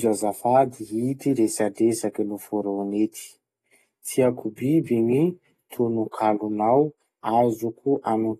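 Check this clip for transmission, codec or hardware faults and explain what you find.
There's one fault, and it runs the whole way through: AAC compression. Nothing comes through above 12.4 kHz, so the speech sounds dull, and the codec damage is plainly audible as a smeared, warbly fizz on sibilants and held vowels. That's likely AAC-LC squeezed hard, which fits a bitrate around 32 kbps. With so few bits, the encoder drops the top end and quantises the remaining bands coarsely, leaving spectral gaps that shift from frame to frame.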